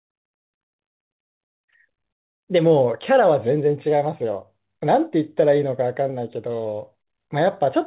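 Nothing stood out on listening to this speech, which comes across as an ordinary narrowband call with no content above about 4 kHz.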